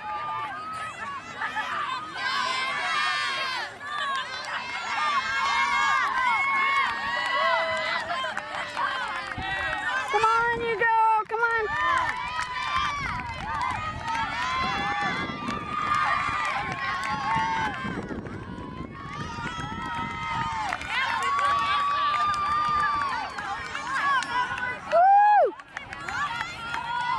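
No technical faults are audible.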